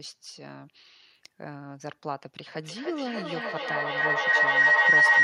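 From 2.49 s to the end of the clip, a feedback howl takes over. A microphone is picking up a loudspeaker on the same call, and each pass around that loop comes back louder, so the sound narrows into a ringing tone near 2 kHz that pulses roughly every third of a second and peaks at about 15 dB above the speech. A spectrogram shows a bright horizontal band near 2 kHz with regular bursts, and the waveform swells far above the speech level.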